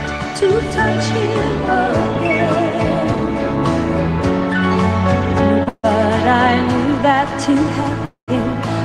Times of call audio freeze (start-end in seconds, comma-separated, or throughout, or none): 5.69-5.85, 8.05-8.30